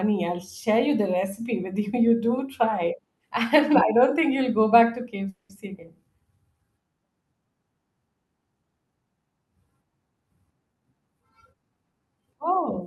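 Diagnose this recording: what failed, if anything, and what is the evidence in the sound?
At 5.29 s the speech stops moving forward. For about 200 ms the last sound is drawn out as a fading buzz, with roughly 10 ms of true silence. Then the speech resumes where it left off, and nothing seems lost. This is a call audio freeze at the network and jitter-buffer stage. Packets were likely held up in transit, so the buffer ran dry. The receiver filled about 200 ms and added that much delay.

From 10.72 s to 12.01 s the speech is hurried but keeps its pitch. It runs at about 116% speed, with no gaps or pitch shift. That points to a jitter buffer speed-up in call processing. The buffer had built up surplus delay. To drain it, the receiver cut many short pitch-period pieces, about a fifth of a second in total.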